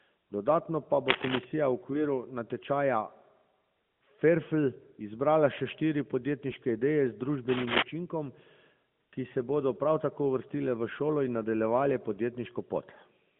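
At 1.08 to 1.45 s and again at 7.48 to 7.83 s, a dense, ragged burst of crackling noise sits over the speech, each lasting about a third of a second and standing a few dB above the speech itself. This is cable scratch noise, likely from a worn lead or connector being disturbed so its contact resistance fluctuated rapidly. Because the speech is band-limited to mobile narrowband, it has no content above about 3.5 kHz.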